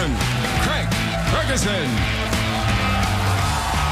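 No faults are audible anywhere in the clip.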